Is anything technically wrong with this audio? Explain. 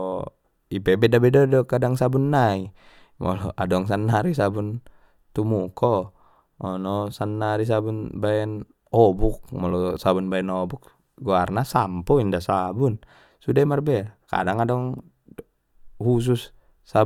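No, nothing is technically wrong with this audio.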